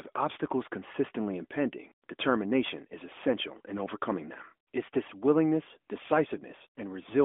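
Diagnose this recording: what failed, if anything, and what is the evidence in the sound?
Nothing stood out on listening to this recording, which carries the narrow, telephone-band character of an AMR narrowband mobile codec path working as it should.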